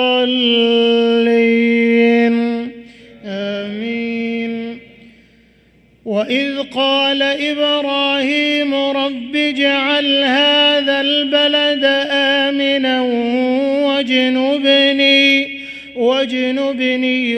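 No technical faults can be heard anywhere in this recording.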